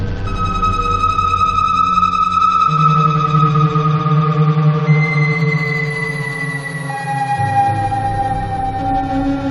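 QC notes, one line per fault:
No faults were found in the music. Nothing in the clip calls for a QC entry.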